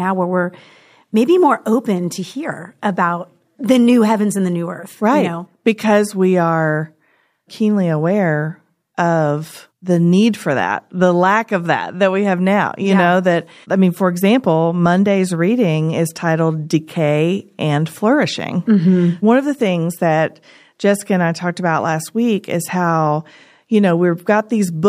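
There are no technical faults in this speech audio, so there is nothing to set out in time order.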